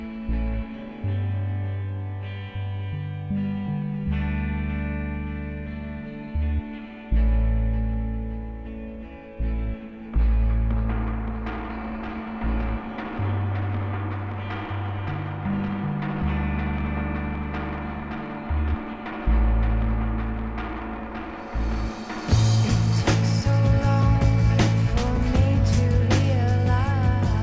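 Nothing here goes wrong: the audio just carries the ordinary character of a call link, with everything above 8 kHz missing, which fits a wideband call codec.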